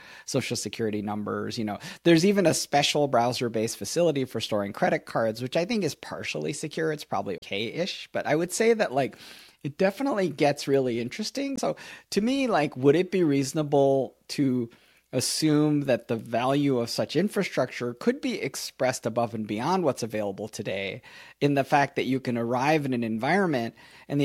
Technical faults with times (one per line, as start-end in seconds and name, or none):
7.38-7.43 damaged data in a compressed stream
11.54-11.60 damaged data in a compressed stream